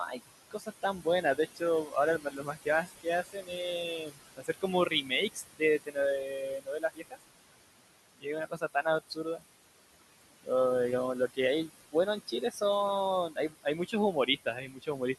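Speech runs the whole way through with noise suppressor artifacts: the room noise, which sits about 12 dB below the voice, is pulled down by about 19 dB in the gaps and swells back under each phrase. That pumping, tied to where the voice starts and stops, separates it from codec warble, which stays even whatever the level. Speech cut by the noise suppressor appears at 0.07–3.52 s, 3.98–7.23 s, 8.19–9.43 s, 11.28–11.95 s, 12.27–12.62 s and 13.3–15.01 s. Soft consonants and word endings are turned down with the background, by up to about 22 dB around 4–7 s, adding up to roughly a second and a half there and a second or so in the opening stretch. These are frame-level gain dips on quiet parts of words, so they sound swallowed rather than chopped, unlike dropouts, which cut the sound outright regardless of its level.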